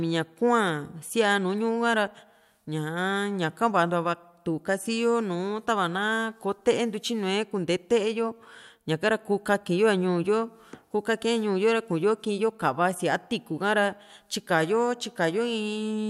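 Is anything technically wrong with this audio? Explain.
No, nothing technically wrong stood out on listening to this speech recording.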